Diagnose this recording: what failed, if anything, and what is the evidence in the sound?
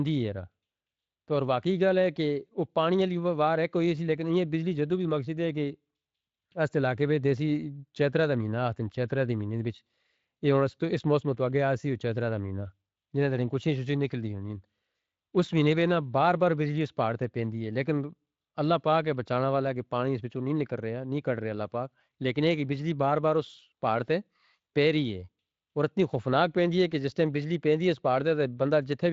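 Nothing stood out on listening to this speech recording that would point to a failure at any stage of the chain.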